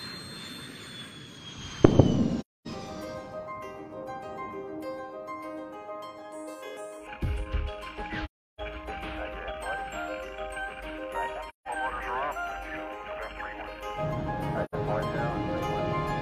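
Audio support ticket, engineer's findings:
AAC frame loss with muting at 2.40–2.67, 8.24–8.61, 11.49–11.68 and 14.64–14.75 s. Soft-faded silent holes from zeroed decoder frames. Lengths fit multiples of one roughly 43 ms frame. Faded edges, unlike a hard dropout.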